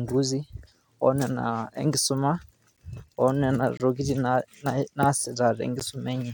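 Speech, interrupted three times by a gap between stream segments: a hard-edged silence at 2.77 s lasting about 11 ms, another from 3.77 to 3.80 s lasting about 24 ms, and a third at 5.80 s lasting about 13 ms. They fall on boundaries of 1-second segments whose timestamps don't quite meet, so the player pads the difference with silence. Unlike a dropout, no speech is missing; the sound resumes exactly where it stopped, just slightly late.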